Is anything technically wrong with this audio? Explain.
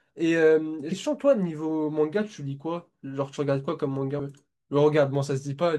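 Yes. Damaged data in a compressed stream appears at 0.91 s and again at 4.18 s. At each point the decoder meets corrupted bytes, misreads the frame and loses sync until it finds the next valid header, leaving a brief glitch in the speech.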